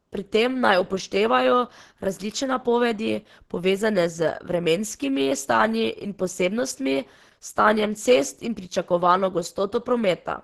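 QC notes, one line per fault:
Throughout, Opus compression: the speech sounds muffled, hoarse and grainy, with rough, noisy texture and reduced top end. This is likely Opus running in its hybrid speech mode at super-wideband bandwidth, heavily starved of bits, which fits a bitrate near 12 kbps.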